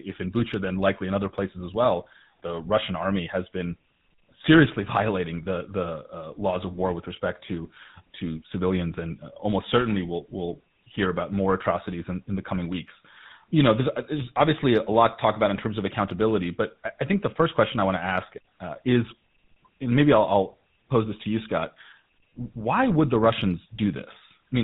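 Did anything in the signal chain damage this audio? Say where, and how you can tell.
Yes. The damage sits at the codec stage, where the speech went through GSM full-rate coding, and it lasts for the whole clip. Nothing reaches above 4 kHz, and the voice has a steady buzzy, gravelly roughness that is plainly audible. The codec models the vocal tract with a filter and drives it from a sparse pulse excitation that keeps only every third sample, so fine voicing detail is replaced by a coarse, grainy buzz. The sound fits a 13 kbps rate.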